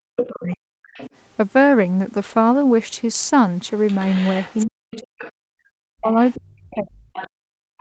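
From 0.0 to 0.78 s the speech is suppressed in double talk, dipping by as much as about 40 dB. Both sides likely spoke at once, so the echo canceller turned the talker down too. The other side's voice leaks through, probably from unremoved loudspeaker echo, at 0.17 to 0.27 s almost as loud as the talker, and fainter at 0.93 to 1.1 s and 3.87 to 5.32 s. It is a second voice, not a repeat of the talker. Suppression returns from 4.64 s to the end, as leaked speech reappears from 6.3 s onward.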